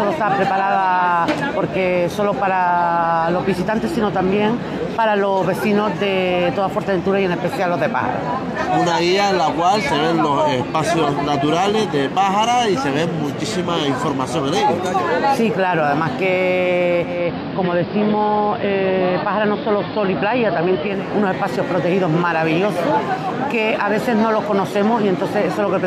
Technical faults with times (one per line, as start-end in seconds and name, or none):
16.99-21.12 digital radio blending to analogue